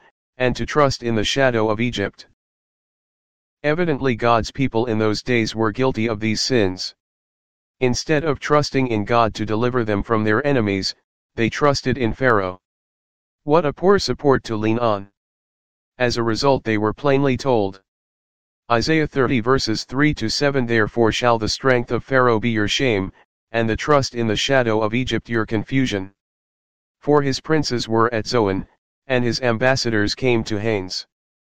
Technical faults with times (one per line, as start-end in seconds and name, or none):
none